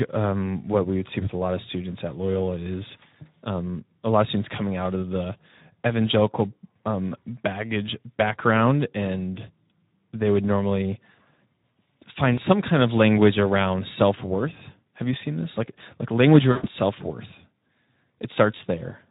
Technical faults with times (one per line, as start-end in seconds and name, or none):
0.00-19.10 Speex codec
12.33-12.40 VoIP packet loss concealed by the speech codec
16.51-16.69 VoIP packet loss concealed by the speech codec